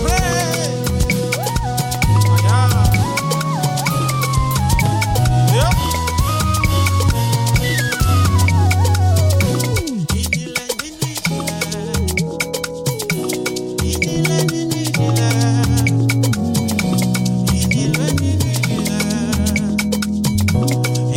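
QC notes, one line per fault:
No faults found.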